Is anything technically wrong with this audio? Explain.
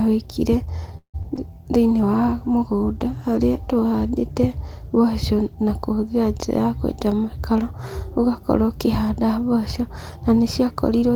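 Yes, this speech clip has four kinds of call-transport fault, all within its first seven seconds.

From 0.97 to 1.16 s there is a call audio freeze. The likely cause is delayed packets draining the jitter buffer, so the receiver stretched the last sound into a fading buzz for about 163 ms, roughly 90 ms of it silent. Speech then resumes where it stopped, with nothing lost, only delayed. On a spectrogram this appears as a smeared, decaying band ending in a blank strip, and the waveform shows a tapering, repetitive envelope.

Short concealed packet loss follows at 1.22–1.26 s and 1.36–1.39 s, each covering about 20 ms of audio that never arrived. The decoder bridged each hole by extending the preceding sound and crossfading back into the real signal, leaving a quick smear or wobble. A spectrogram shows brief blurred columns where harmonic detail goes soft. The waveform shows short segments that repeat the prior cycle shape instead of following the speech.

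A call bitrate drop runs from 1.76 to 6.49 s. The coarser, muffled sound points to the encoder being pushed from roughly 32 to 18 kbps, sitting at the lowest rate for about 2.7 s. With fewer bits, Opus quantises coarsely and trims the top of the spectrum, so the speech turns rough and dull. A spectrogram shows the high-frequency content cut off by a flat ceiling and grainy texture below it.

Overlapping the end of that, from 6.38 to 6.65 s, a jitter buffer speed-up plays the audio at about 111% speed. The receiver had built up excess delay and shed it by cutting out whole pitch periods, around 40 ms in total, so the speech sounds briefly hurried at unchanged pitch. The waveform shows compressed syllables with tiny splice points, and spectrogram harmonics stay level while events arrive closer together.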